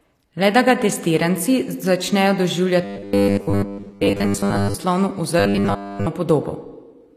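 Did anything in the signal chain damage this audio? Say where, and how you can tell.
Yes. Codec stage: gritty, metallic treble that stops at 14.9 kHz throughout, likely HE-AAC compression at a low bitrate. Unlike a plain low-pass, the upper band is rebuilt and mismatched rather than missing.

Driver or buffer stage: robotic sound from repeated short buffers, from 2.84 to 4.75 s (mostly repeats) and 5.40 to 6.07 s (entirely repeats). It has a rigid 100 Hz buzz, likely from 10 ms repeats, fixed in rate unlike codec grit.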